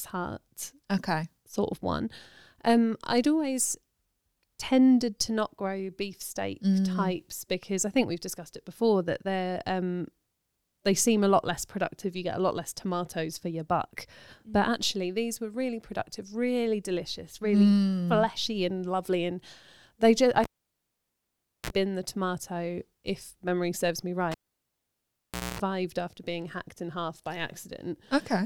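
Cable pulled and plugged in, at 20.44 to 21.70 s and again at 24.31 to 25.60 s. The live speech cable drops out with a pop for about 1.2 s of near silence. A 60 Hz mains buzz follows while only the tip makes contact, lasting 39 ms the first time and 234 ms the second, then a second pop as the signal returns.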